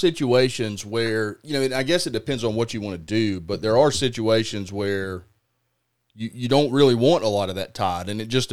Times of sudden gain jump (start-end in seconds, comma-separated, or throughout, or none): none